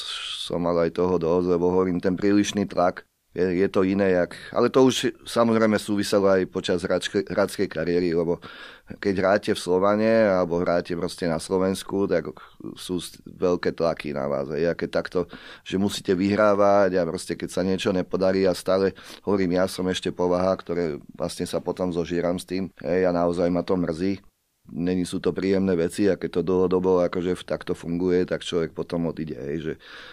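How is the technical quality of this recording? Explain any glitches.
No glitches or faults are audible.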